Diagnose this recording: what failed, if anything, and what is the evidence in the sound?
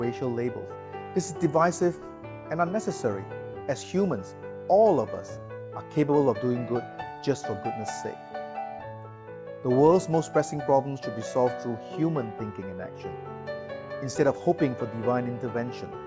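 Nothing stood out on listening; the recording sounds as a call-path capture should, with the top end stopping at about 8 kHz as expected for a wideband call codec.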